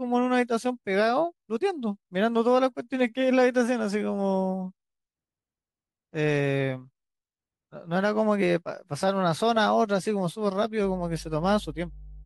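A speech recording that picks up mains hum from 10.81 s to the end: a steady 50 Hz tone, roughly 20 dB below the speech, from a ground loop or nearby transformer. Unlike broadband rumble or wind noise, it holds one fixed pitch with some low harmonics.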